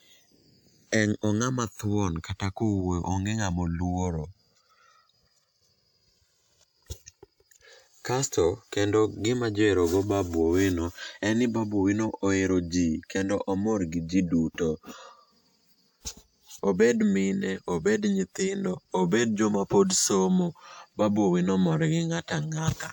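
From start to finish the two channels are drifting apart. Each side appears to run on its own clock, and the clocks disagree by roughly 300 parts per million. So the delay between left and right keeps growing, reaching about 7 ms by the end. When the channels combine, that changing delay cuts comb notches into the speech. The notches glide slowly through the spectrum. The result is a slow, sweeping flange over the voice.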